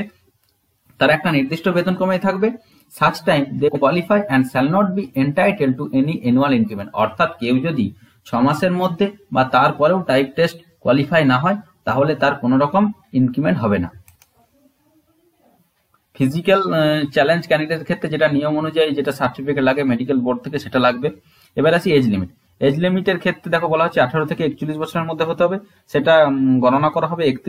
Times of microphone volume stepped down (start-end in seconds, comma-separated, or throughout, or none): none